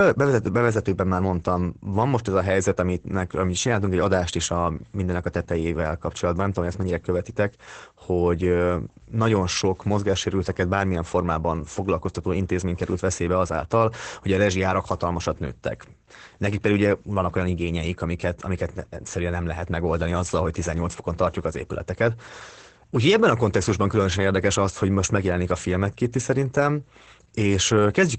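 Throughout the speech, Opus voice compression is plainly audible. The top of the band stops at about 8.6 kHz, consistent with Opus running its SILK linear-prediction coder in wideband mode. The excitation is coded coarsely, so the speech sounds muffled and somewhat hoarse, with a faint robotic edge. The degree of damage fits a low bitrate of around 12 kbps, where SILK must discard fine spectral and pitch detail.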